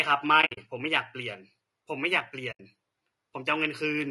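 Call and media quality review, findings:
Throughout: rough, grainy speech, noise between harmonics, lowered or synthetic-sounding top band. Likely low-delay AAC compression (AAC-ELD), short frames starving bits, consistent with roughly 32 kbps.

0.41–0.58 s and 2.51–2.60 s: soft-edged dropouts. AAC frame loss with muting, lost frames zeroed and faded by overlapping windows. First spread over about 160 ms, longest gap around 70 ms.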